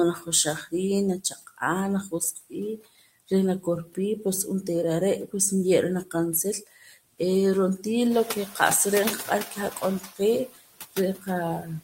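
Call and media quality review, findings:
Noise suppressor artifacts, whole clip. Background pulled down about 15 dB, frame by frame. Residual noise dips between phrases, swells under speech. Component: noise suppressor. Mechanism: per-band gain tracking an estimate of steady noise, lowering bands it takes for noise.

Speech cut by the noise suppressor, 0.16–3.97 s. Soft consonants and word endings swallowed, roughly a second of speech in total. Deepest drop about 19 dB. Component: noise suppressor misclassifying low-level speech as noise.

Speech cut by the noise suppressor, 6.05–7.2 s and 7.78–8.56 s. Faint, clipped-off fragments. Roughly 0.4 s and 0.2 s affected. Deepest drops about 17 dB and about 9 dB. Same mechanism.

Speech cut by the noise suppressor, 9.25 s to end. Quiet speech turned down with the background, deepest drop about 20 dB. Sound swallowed, faint. Component: noise suppressor gain.

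Noise suppressor catching up, 8.1–9.89 s. Room noise steps up about 11 dB near 8 s and ends about 13 dB below speech. Noise passes with reduced suppression at first, then sinks over 1.79 s. Reduction there about 10 dB. Component: noise suppressor noise estimate. Mechanism: the estimate lags a sudden rise in background, then adapts.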